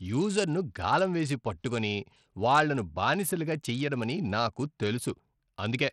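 The link was most likely carrying the speech through Bluetooth SBC compression at a starved setting, with plainly audible damage that fits a low bitrate around 80 kbps. With so few bits to share, the coder's upper sub-bands get little or nothing while the remaining bands are quantised coarsely. From start to finish the treble thins out and flickers, and a gritty, grainy noise with aliasing clings to the speech.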